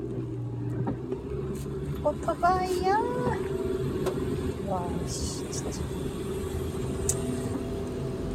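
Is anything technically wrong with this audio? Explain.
No, nothing technically wrong turns up here; these sounds come through just as they should, with no faults to point out.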